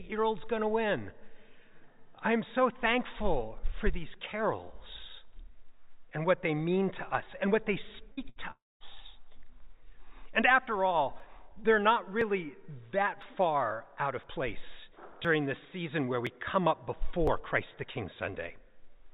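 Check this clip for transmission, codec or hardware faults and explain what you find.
Three kinds of fault are present, all from about 8.1 s onward. They ride on a narrowband call path that keeps nothing above 4 kHz, which fits G.711 A-law at 64 kbps.

Two bursts of packet loss occur, at 8.12 to 8.20 s and 8.29 to 8.39 s. Each time a run of packets failed to arrive in time, and the receiver extended the last audio it had, tapering it down. That concealment lasts about 53 ms in the first gap and 66 ms in the second, heard as a short held buzz or fading hiss. The sound then picks up about 60 ms further along, so that stretch of material is gone.

From 8.51 to 8.83 s the signal vanishes for longer, likely a long network dropout. The receiver first stretches the last audio into a fading buzz or hiss for roughly 0.29 s. That decays to silence lasting about 220 ms. When the sound returns it has jumped ahead by about 300 ms, the span that never reached the listener.

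Between 11.2 and 18.29 s there are periodic USB or driver dropouts, about seven in all, spaced about 1.01 s apart. At each one something stalled the audio interface or driver and roughly 10 ms of samples was skipped outright rather than padded. The splice leaves a regular tick or pop at roughly one-second intervals, audible only where signal is present.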